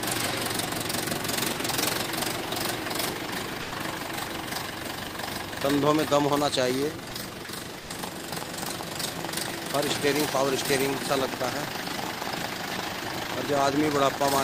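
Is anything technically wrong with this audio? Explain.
Yes. The audio has four short dropouts from the voice detector, at 3.61 to 3.71 s, 7.09 to 7.11 s, 7.45 s, and 7.79 to 7.89 s. The first and last each last about 100 ms. The middle two last about 20 ms. In each gap the sound gives way to steady noise or near silence, then returns. The likely cause is sound dropped by the voice detector. The sender judged the sound to be background and stopped transmitting, and the receiver filled in comfort noise. This fits Opus DTX.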